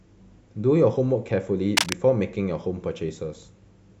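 Contact resistance in a worn cable or connector likely flickered, giving cable scratch noise from 1.77 to 1.93 s: rustling bursts roughly as loud as speech.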